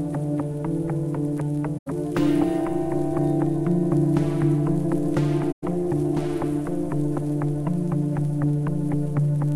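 Corrupt frame concealed at 1.77 to 1.90 s and 5.51 to 5.64 s: damaged AAC frames, roughly five each, were muted or smeared by the decoder.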